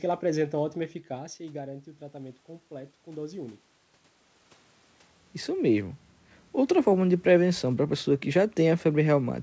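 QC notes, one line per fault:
0.74–3.69 s, automatic gain rising: after "ela apresenta" the input drops about 13 dB as the talker moves back, and the gain control slowly lifts its gain about 4 dB over three seconds, so speech and room noise swell together.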